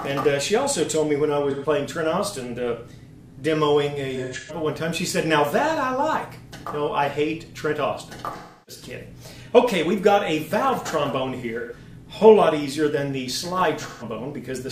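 AAC frame loss with concealment occurs at 1.50–1.66, 4.15–4.56, 8.37–8.83, 11.57–11.73 and 13.87–14.04 s. The decoder rebuilds the missing frames from the last good spectrum, so each gap sounds like a smeared, noisy patch. A spectrogram shows these as blurred, flattened blocks.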